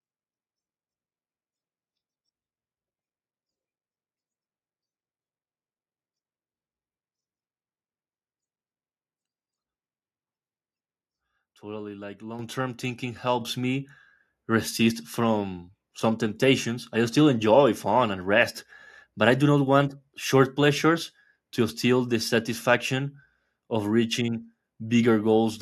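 Microphone volume stepped up twice in this speech clip, at 12.39 s by about 8 dB just before "term thinking", then at 13.41 s by about 5 dB just after it. The call software judged the input too quiet and raised the device gain in steps, so voice and background jump together.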